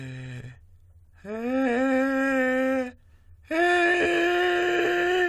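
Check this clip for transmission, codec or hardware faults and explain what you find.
Nothing stood out on listening to this music clip.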